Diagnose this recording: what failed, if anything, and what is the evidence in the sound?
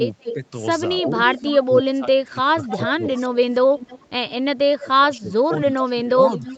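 Call processing is the stage here. From 0.2 s to the end, a copy of the speech returns about 312 ms late, roughly 15 dB under the direct voice. That's an echo leak, most likely the far end's echo canceller passing its loudspeaker pickup back down the line.

Same stage, second symptom: from 0.33 s on, the speech keeps ducking and breaking up, dropping by something like 25 dB at its deepest, on audio band-limited to 8 kHz. This looks like speech suppressed in double talk, likely the canceller mistaking this talker for echo and squashing both.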